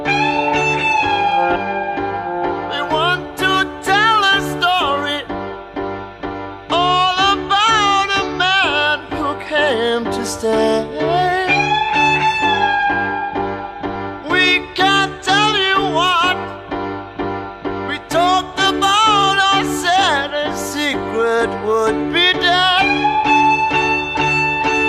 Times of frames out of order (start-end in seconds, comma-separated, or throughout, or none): none